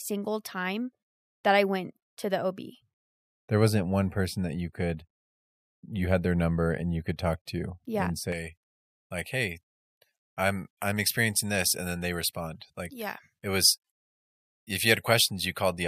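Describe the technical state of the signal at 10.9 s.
At 10.9 s the speech sounds thin, bright and hissy, with sibilants standing out sharply. This is pre-emphasis left on, running from 8.32 s, just after "talk to yeah and", to the end of the clip. The treble was lifted for transmission and the matching de-emphasis was never applied, leaving 10 kHz about 11 dB hotter than 1 kHz, a tilt consistent with a J.17-style curve.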